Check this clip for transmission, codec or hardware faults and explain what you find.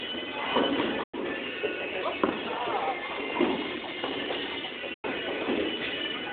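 Two digital broadcast dropouts, at 1.03 to 1.14 s and 4.94 to 5.05 s. Each time the receiver lost valid frames and muted, fading out over 8 ms and leaving a hole of about 96 ms, consistent with three lost frames. The sound then resumes, with that stretch missing.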